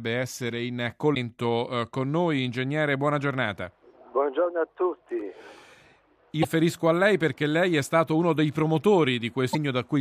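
Three brief glitches, at 1.14–1.17 s, 6.42–6.45 s and 9.52–9.55 s, where the audio skips ahead through a garbled flicker about one 26.1 ms frame long. The likely cause is a broken MP3 bit reservoir: after dropped frames, the decoder borrows bytes from the wrong frame.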